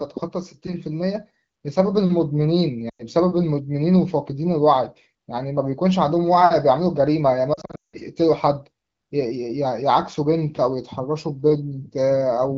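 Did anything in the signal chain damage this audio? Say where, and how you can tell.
Yes. Lost AMR speech frames on the radio link around 2.89–3.03 s and 7.53–7.97 s: the wideband decoder stretches the last good frame, which fades quickly to silence, then resumes rough.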